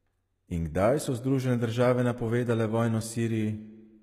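Across the whole speech clip the treble is bright yet gritty, with lispy s sounds and nothing above 14.9 kHz, likely HE-AAC compression at around 20 kbps, unlike a plain low-pass.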